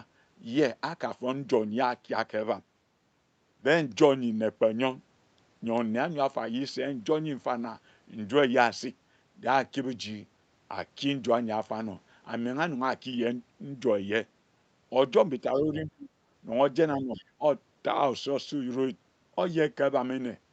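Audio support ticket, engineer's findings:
Speech suppressed in double talk, 15.42–16.09 s and 16.97–17.44 s: level dips, deepest around 35 dB, then around 15 dB. Likely echo canceller ducking both talkers. Waveform shows envelope collapsing; spectrogram shows the 8 kHz-capped content thinning, to near-blank in the first.

Other side's voice leaking through, 17.15–17.25 s: brief faint second voice, very low level relative to the talker. Likely residual echo the canceller missed. Spectrogram shows a weak separate harmonic trace overlapping the talker's; waveform barely changes.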